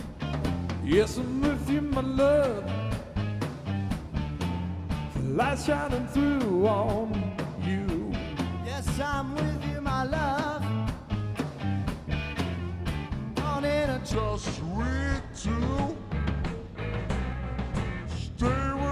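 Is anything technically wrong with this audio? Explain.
Yes. A wrong sample rate fault runs from 14.15 s to the end. The samples are played out more slowly than they were captured, with no conversion, which fits 44.1 kHz audio played at 32 kHz. The sound slows to 0.726 speed and drops 5.55 semitones.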